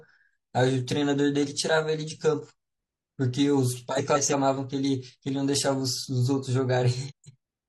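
A speech recording with two bursts of frames out of order, at 3.98–4.34 s and 7.08–7.36 s, where two neighbouring runs of audio were decoded in swapped sequence. Each stretch plays its halves exchanged, heard as a garbled flutter. Each half is about 0.17 s, which fits runs of four codec frames. A spectrogram shows abrupt discontinuities in the harmonic tracks at each boundary, and the waveform has matching steps. No time is lost.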